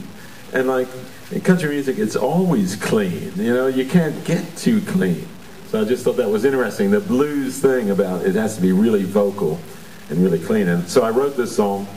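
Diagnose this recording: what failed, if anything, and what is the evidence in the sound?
Low bit depth without dither throughout: rounding error follows the sound about 25 dB down, likely sample-format conversion truncating to a 7-bit depth.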